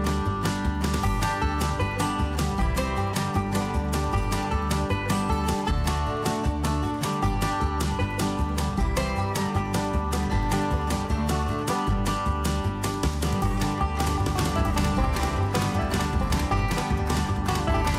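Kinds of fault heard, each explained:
Doubled audio track: from 14.06 s to the end, a second full-band copy runs about 1.5 s behind, a few dB quieter, switching on abruptly without decay, likely a duplicated capture path.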